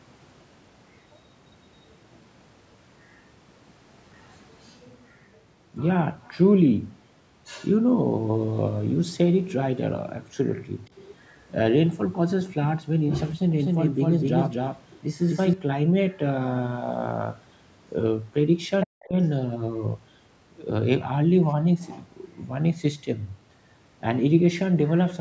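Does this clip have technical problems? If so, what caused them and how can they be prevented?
Yes. At 10.85–10.89 s, 19.03–19.07 s, 21.49–21.53 s and 21.81–22.03 s, brief, very faint scraps of a second voice appear beneath the speech, the last one somewhat stronger. This is the other side's voice leaking through, likely because the echo canceller left some loudspeaker sound in the microphone signal. Using a headset or retuning the echo canceller would prevent it.

From 13.59 to 15.53 s the speech is doubled. A second copy at roughly equal loudness trails about a third of a second behind, with no room tail, and it starts and stops abruptly. This is a doubled audio track, likely from a second, slower capture path or an edit that left two misaligned copies. Capturing through a single path and checking edits for overlapping regions would avoid it.

Between 18.85 and 19.19 s the talker dips sharply, by about 40 dB at the deepest, with about a third of a second affected in all, while a faint leak of the far side also sounds at 19.03–19.07 s. 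This is speech suppressed in double talk, likely because the echo canceller could not separate the talker from the echo and attenuated both. A headset, or an echo canceller with better double-talk detection, would prevent it.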